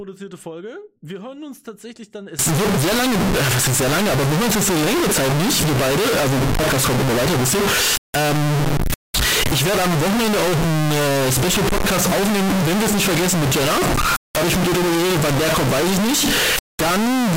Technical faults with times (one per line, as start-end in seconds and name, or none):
2.39-17.36 float read as integer